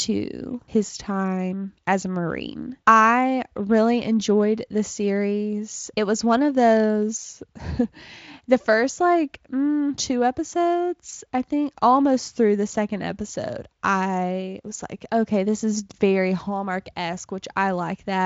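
No technical faults can be heard anywhere in this recording.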